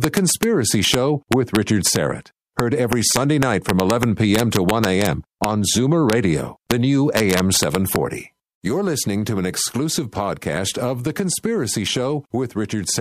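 Integer overflow cracks through the speech at 0.04–0.43 s, 0.85–0.94 s, 1.32–1.96 s, 2.60–5.06 s, 5.44 s, 6.10–6.13 s, 6.71 s and 7.17–7.96 s. Peaks that exceed full scale by up to about 2 dB wrap to the opposite sign instead of being limited, producing harsh snaps. On the waveform, tips jump rail to rail. A spectrogram shows broadband vertical streaks.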